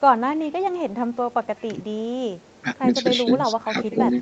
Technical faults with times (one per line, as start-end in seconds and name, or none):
0.27-0.78 echo leak
1.12-1.65 echo leak
1.75-1.80 speech suppressed in double talk
2.39-2.78 echo leak
2.61-2.66 speech suppressed in double talk
3.24-3.29 speech suppressed in double talk
3.51-4.22 echo leak
3.71-3.99 speech suppressed in double talk